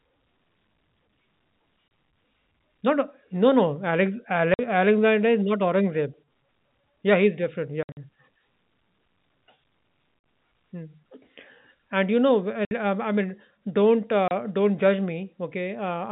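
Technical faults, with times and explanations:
1.88–1.91 s, 4.54–4.59 s, 7.83–7.97 s, 10.19–10.24 s, 12.65–12.71 s and 14.28–14.31 s: packet loss filled with silence. The speech drops out abruptly, and each gap has hard edges. The gaps last 30, 50, 110, 50, 60 and 30 ms. These are steps of 10 ms, which fits 10 ms packets. At 7.83 s the loss is scattered over 140 ms, and the longest hole is 60 ms. The gap at 12.65 s falls between "and you know" and "um i". The receiver played silence for the missing audio.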